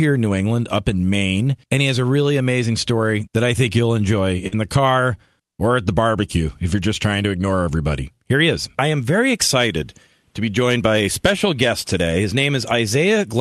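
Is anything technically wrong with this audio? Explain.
Yes. There is one short concealed packet loss in this speech. It runs from about 4.47 to 4.55 s, just after "I think you'll enjoy" and before "the car or at". Roughly 40 ms of audio failed to arrive in time. The receiver covered the gap by extending the preceding sound from its pitch and shape, then blended back into the real signal. The result is a brief smeared wobble where the transition should be clean. The call codec path, which points to Opus with a top end near 12 kHz, adds its usual coding texture.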